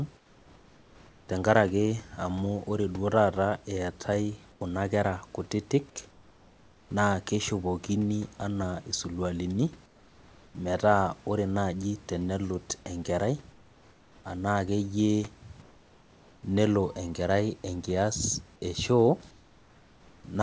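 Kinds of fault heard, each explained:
Comfort noise in place of the background: in each pause, such as between "amunore duo taata eetai" and "kera kutitik", the room's detailed background turns to flat, featureless hiss about 3 to 5 dB quieter, likely from discontinuous transmission with receiver-generated noise.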